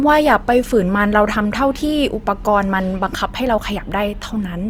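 A speech recording with plainly audible Opus compression from start to finish. The sound is rough and grainy rather than swirling, as if each band's overall energy survives but the detail inside it is rebuilt from folded or noise-like content. This likely comes from the encoder's music (CELT) mode at a rate that fits about 24 kbps. On a spectrogram the bandwidth stays full, with few holes, but harmonics look smeared and speckled with noise.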